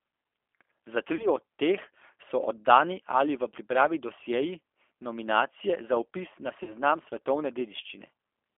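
Throughout the clip the speech sounds rough, slightly synthetic and boxed in, with no air above 3.4 kHz and thin lows below about 300 Hz. This is G.729 codec damage, and it is plainly audible. The 8 kbit/s G.729A coder does not send the waveform. It sends a vocal tract filter, a pitch predictor and a few pulses per frame, so fine detail is rebuilt coarsely and the speech takes on that processed edge.

At 1.15 s the speech briefly smears into a stretched, fading sound that lasts until about 1.28 s, just before "od teh so oddani". A similar smear runs from 6.63 s to 6.75 s, right after "nominacije za vpis na". Both are VoIP packet loss concealed by the speech codec. Each gap is 40 ms of missing audio, which fits two lost 20 ms packets. The decoder filled each gap by extending its last pitch and filter at falling gain. Each frame builds on the previous one, so the sound stays weakened for a while after packets resume, which stretches each glitch to well over 100 ms.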